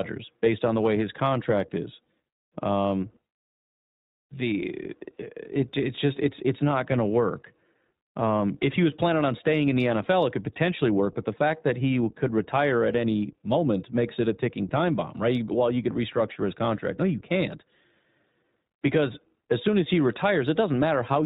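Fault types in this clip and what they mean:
iLBC codec: narrowband coding with nothing above 4 kHz, a flat ceiling on the spectrogram throughout; plainly audible roughness from independently coded 20 ms frames, fitting a 15.2 kbps mode.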